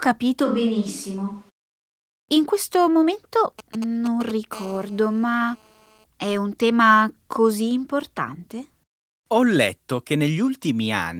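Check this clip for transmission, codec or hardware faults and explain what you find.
Three faults are present in this speech clip: a brief microphone change near the start, then radio interference from a 2G phone that moves from signalling bursts into a continuous call buzz.

From 0.46 to 1.49 s the sound turns roomy and hollow, with thinner bass, a level drop of about 5 dB and room noise sitting only some 35 dB below the speech. This is likely a switch to a distant microphone after the close microphone's feed dropped out, with abrupt transitions both ways.

From 3.59 to 4.53 s, right after "questo momento", GSM signalling bursts appear: a galloping pattern of ticks and short buzzes at 217 Hz, about 15 dB below the speech. A nearby 2G handset is exchanging brief control transmissions, and the audio circuitry rectifies each radio burst into an audible pulse.

From 4.53 to 6.04 s the pattern becomes a continuous GSM phone buzz, ending just before "è un tema così". 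The handset is now in a call, transmitting 217 bursts per second, and rectification produces a hard, raspy 217 Hz buzz rich in harmonics, roughly 26 dB below the speech and unrelated to the voice.

The Opus voice compression sounds consistent with a hybrid, fullband mode near 20 kbps, and it leaves only light coding texture.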